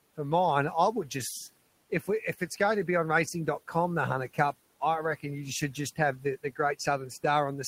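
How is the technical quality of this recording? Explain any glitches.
One glitch stands out, with steady room noise sitting about 24 dB below the speech. Speech cut by the noise suppressor, 1.90 to 2.08 s: the suppressor mistook quiet speech for background and pulled it down by about 14 dB, so roughly a tenth of a second sounds swallowed and faint.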